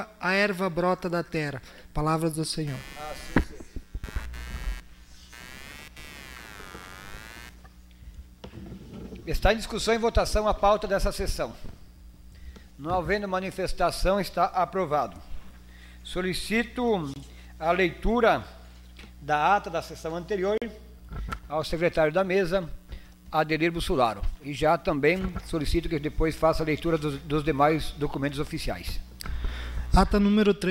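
From 2.67 to 7.57 s a buzzy, chirping noise rides under the sound, pulsing at around 100 Hz and sitting about 20 dB below it. It comes and goes on its own schedule, unrelated to the audio. This is computer activity noise: shifting load on the processor, graphics card or mouse disturbs the ground shared with the audio circuit, and that fluctuation leaks into the signal as a rasping hum.

Two brief dropouts follow. At 17.14 to 17.16 s the sound cuts to silence for 23 ms, and at 20.58 to 20.62 s it vanishes for 41 ms. These gaps are likely Bluetooth stalls: radio interference delayed packets, the headphones' buffer emptied, and playback paused until the resent data arrived.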